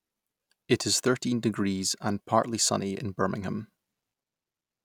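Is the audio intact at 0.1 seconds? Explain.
Yes, at 0.1 seconds the speech plays cleanly with no audible dropout, click, distortion or other fault.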